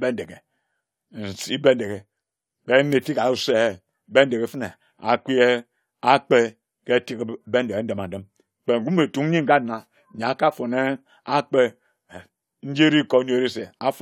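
Nothing stood out as a technical problem on listening to this speech recording.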